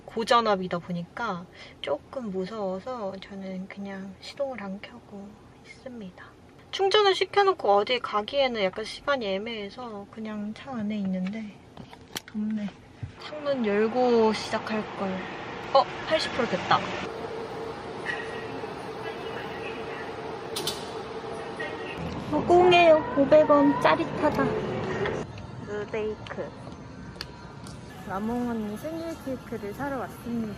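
No technical faults are audible.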